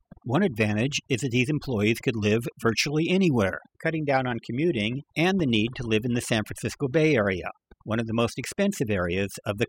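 A noise reduction stage was pushed far too hard across the whole recording, producing overdone noise removal. It treats any frequency band that sits close to its noise estimate as noise and drives it down or out entirely, so the quieter components of the speech are stripped away along with the noise. The background between phrases collapses to near silence peppered with twinkling specks.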